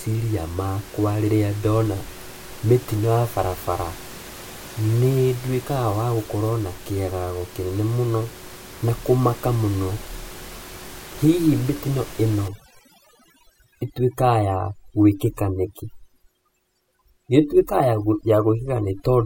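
From 12.48 s, just after "mĩtino ĩno", to 19.26 s, overdone noise removal cuts single frequency bands near the room-noise level, taking quiet speech detail too. The background drops and breaks up into twinkling specks, unlike a gate's whole-band muting.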